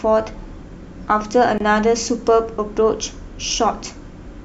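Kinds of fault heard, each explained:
Gap at a join of encoded pieces: The speech was encoded in separate pieces about 4 s long and joined untrimmed. Encoder start delay and end padding remain. A gap of about 24 ms opens from 1.58 to 1.60 s, with smeared edges. The speech then resumes.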